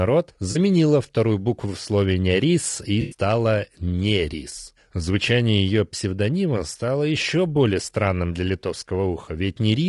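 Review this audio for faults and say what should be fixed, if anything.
Low-delay AAC compression runs through the whole clip. The speech sounds rough and grainy, with noise filling the gaps between harmonics and a thin, synthetic-sounding top band. This fits the short-frame AAC-ELD coder, the likely cause, running at around 32 kbps: short frames resolve pitch harmonics poorly, and at this low bitrate bits are spread thin. On a spectrogram, harmonic stripes look smeared, the spaces between them are speckled, and the upper band appears blocky or flattened. Prevent it by raising the bitrate or using a longer-frame codec.

AAC frame loss with concealment occurs at 0.51–0.57 s and again at 3.01–3.17 s. The first patch covers about 40 ms of missing audio, consistent with two lost frames, and sounds like a brief smeared, phasey blur. The second covers about 100 ms, roughly five frames. The decoder rebuilds the gap from the last good spectrum. 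On a spectrogram the gaps show as smudged blocks with frozen energy, and the waveform loses its fine structure there. Prevent it with forward error correction or redundant packet transmission on the network path.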